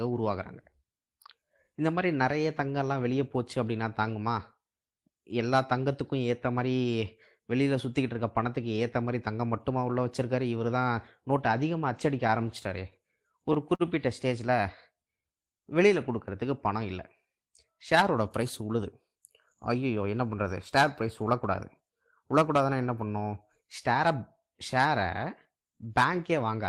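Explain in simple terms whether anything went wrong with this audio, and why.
A few things did go wrong, all in the middle stretch, and they share one root cause: the speech arrived over a network at an uneven pace.

From 12.27 to 13.82 s there are repeated stalls (stutter). Chunks of audio kept showing up late, so the receiver ran dry eight times in that span. Each time it held and stretched the last bit of sound until fresh audio came in. The longest hold is about 49 ms, and together they add roughly 119 ms. Nothing is actually lost, but the speech catches and drags there.

Right after that, the receiver tries to rebuild its safety margin with a jitter buffer slow-down, from 14.61 to 15.23 s and again from 15.63 to 16.46 s. It quietly repeats tiny slices of the sound, adding about 49 ms and then 46 ms. The speech plays at roughly 94 to 95 percent speed, so it sounds a little drawn out, though the pitch stays the same.

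Then it goes the other way with a jitter buffer speed-up, from 18.43 to 19.17 s and from 19.74 to 20.04 s. Too much audio had piled up, so the receiver trims small slivers to catch up: roughly 70 ms in the first stretch and a few tens of milliseconds in the second. The speech runs at about 109 percent and then 112 percent speed, so it sounds slightly hurried, with the pitch still unchanged.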